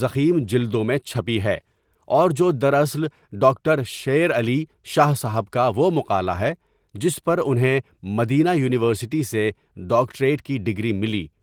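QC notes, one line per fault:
No faults found in this speech clip. The Opus voice compression leaves only light traces, running in hybrid mode at full bandwidth with nothing above about 20.2 kHz, which fits a bitrate around 20 kbps.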